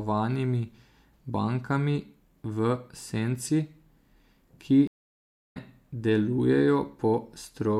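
At 4.87 s a stream reconnect cuts the speech for 0.68 s; the decoder restarts mid-stream and resumes at 5.57 s, skipping roughly 0.4 s ahead.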